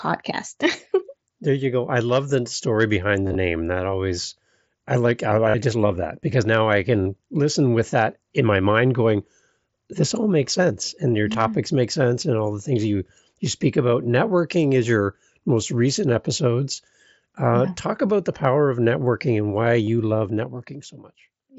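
Concealed Bluetooth headset packet loss occurs six times: 3.26 to 3.35 s after "love the story behind" (gaps spread over 90 ms, longest about 30 ms), 5.50 to 5.54 s between "always I like I" and "I just love that", 7.03 to 7.06 s, 11.33 s, 16.74 to 16.77 s, and 19.85 to 19.87 s after "of networking and why". In each case the receiver filled the lost audio by repeating the last short stretch of waveform, which produces a brief buzzy held tone with a slight warble as the real sound resumes. A dropout would instead leave silence, and a glitch would leave a click.

Zipper noise runs from 20.13 s to the end. The level falls by roughly 20 dB in coarse, unsmoothed steps at about 30 per second, so a fast ticking rides on the fade. A smooth fader move would sound clean.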